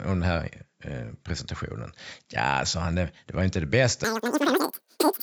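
From 4.04 s to the end at 5.22 s, the speech turns shrill and rushed, running about 2.76 times too fast and roughly 17.6 semitones high. This is a wrong sample rate fault: the ratio fits 16 kHz audio played back at 44.1 kHz without conversion.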